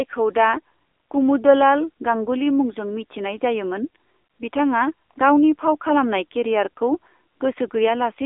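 From start to finish, the speech carries AMR narrowband mobile codec damage. The sound is squeezed into a telephone band of roughly 300 Hz to 3.6 kHz, with nothing above 3.7 kHz. The codec rebuilds the voice from a vocal-tract model excited by sparse pulses. Here that rebuilding is plainly audible. The voice sounds buzzy and synthetic, which fits a low mode near 7.4 kbps.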